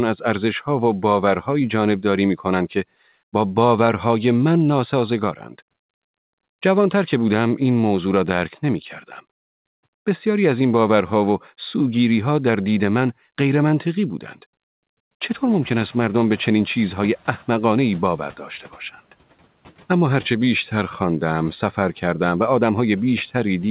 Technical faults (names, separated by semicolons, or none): noise suppressor catching up